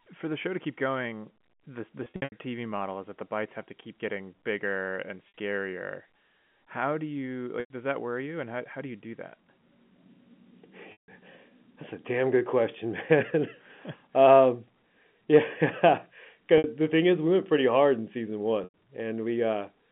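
Packet loss with pitch repetition breaks up this narrowband telephone-line speech six times: 2.04–2.32 s after "keep going the the", 5.28 s after "keep getting bigger and", 7.6–7.7 s after "do you", 10.92–11.08 s, 16.58–16.64 s and 18.64–18.74 s. The receiver bridges each gap by replaying the last pitch cycle, so the short ones sound like a briefly frozen, buzzy tone, while the longer ones fade into silence before the speech cross-fades back in. The first event is a stutter of short losses spread over 280 ms.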